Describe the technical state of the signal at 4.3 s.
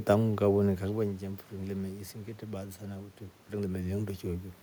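At 4.3 s the signal is intact, with nothing wrong in the transmission or recording chain beyond the background noise of the room itself.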